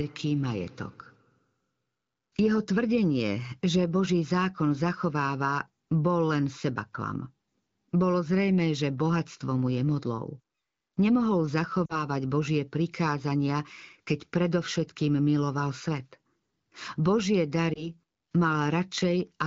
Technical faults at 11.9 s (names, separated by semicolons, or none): lost AMR speech frames